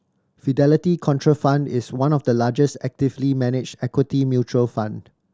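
No technical faults can be heard in the speech.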